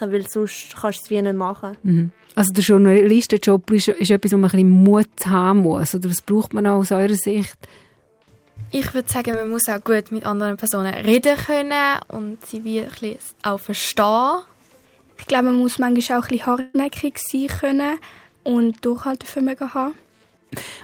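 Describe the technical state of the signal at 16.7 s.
At 16.7 s the signal is inside a burst of packet loss running from 16.61 to 16.76 s. About 140 ms of audio never arrived; the receiver filled roughly 130 ms by extending the last sound while fading it, then resumed further on with that stretch skipped.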